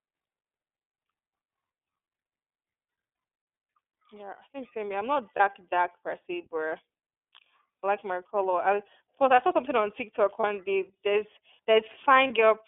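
From the start the speech has the narrow, telephone-like band of the iLBC codec, running from about 300 Hz to 3.5 kHz with nothing above. Voiced sounds come out slightly rough and synthetic, which fits the 13.33 kbps mode with 30 ms frames. Each frame's excitation is coded on its own, so the graininess stays even and never smears or swirls over time the way heavier predictive codecs can.

Lost iLBC frames interrupt the speech four times. The first is at 5.36 to 5.40 s, between "I'm not" and "dark per se but". The second is at 7.79 to 7.84 s, just before "like my color I", and it sounds like a two-frame gap of about 60 ms. The others are at 10.40 to 10.44 s and 12.27 to 12.31 s. Each of these fits a single missing 30 ms frame. In every gap the decoder repeats the last pitch cycle mixed with noise, so you hear a short, held, faintly buzzy vowel rather than silence or a click. The speech then sounds right again at once, with no lingering distortion afterwards.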